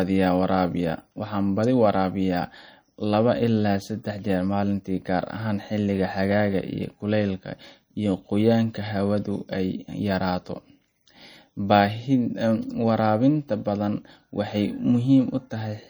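Across the whole speech clip there is plainly audible damage of the kind left by MP3 compression. S sounds turn into metallic chirps, while quieter detail swirls and flickers as weak frequency lines drop in and out from one frame to the next. Consonant attacks are smeared. This likely comes from an encoder short of bits, and the degree of damage fits a low rate near 48 kbps.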